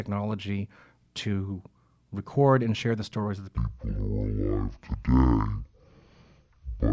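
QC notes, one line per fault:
3.57–6.92 s, wrong sample rate: from 3.57 s to the end, the speech plays at half speed and drops a full octave, 12 semitones down. Because pitch and tempo fall together by exactly the same factor, the samples are being clocked out at half the rate they were captured at, with no resampling. This fits 32 kHz material being played back at 16 kHz. The result sounds low, drawn-out and sluggish, with formants shifted down.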